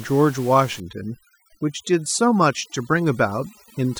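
Overdone noise removal sets in at 0.8 s and runs to the end of the clip. The denoiser is working far too hard: any frequency band that sits close to its noise estimate gets pulled right down or switched off, and the quieter parts of the speech are caught along with the room noise, which lay about 20 dB beneath the voice. The gaps fall to near silence sprinkled with twinkling specks.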